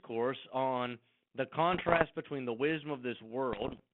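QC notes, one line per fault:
1.73 to 2.05 s, bit errors on an ADPCM link: flipped bits, around one or two percent, knock the decoder's step size and predictor off, causing pops, rough bursts and brief level jumps.
3.52 to 3.80 s, bit errors on an ADPCM link: the same corruption recurs, and each error rings on for milliseconds while the decoder recovers, roughening the sound and making its level jump.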